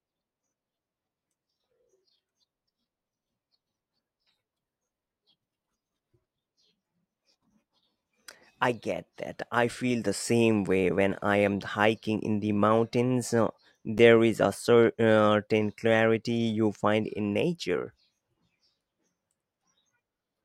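At 9.79 to 9.81 s and again at 13.97 to 13.99 s, the speech shows chunks out of order. A 10 ms block of audio arrives one chunk late and plays after the block that should follow it, so two adjacent 10 ms pieces swap places. Nothing is dropped, but each swap leaves three hard joins, heard as a tiny jumbled stutter in the speech.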